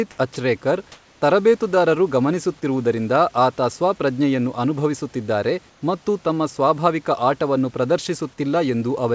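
At 0.34 to 0.36 s, the sender's voice detector likely mistook a quiet stretch of speech for background and stopped sending for 20 ms. This is sound dropped by the voice detector: the receiver filled that gap with synthetic comfort noise. That brief slice of speech is lost and replaced by a flat noise blip before the speech resumes.

Comfort noise in place of the background appears twice. The likely cause is discontinuous transmission: during pauses the sender stopped transmitting, and the receiver generated noise shaped roughly like the room. From 0.92 to 1.22 s, the real room noise, sitting about 35 dB below the loudest speech, gives way to smooth, featureless hiss that is about 2 dB louder. From 5.70 to 5.82 s, the same substitution happens, this time about 2 dB quieter. In both spots the background's texture briefly flattens, heard against the G.722 call path's band limit with nothing above 8 kHz.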